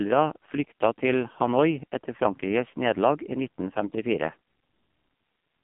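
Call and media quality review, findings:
AMR narrowband mobile codec, whole clip. Speech band-limited to roughly 150 Hz to 3.5 kHz, nothing above 3.5 kHz. Heavy buzzy, synthetic coloration. Probable component: AMR-NB encoder at a low mode, sound consistent with about 5.9 kbps. Mechanism: 8 kHz sampling caps bandwidth; few excitation pulses per subframe drive a vocal-tract model, flattening natural detail.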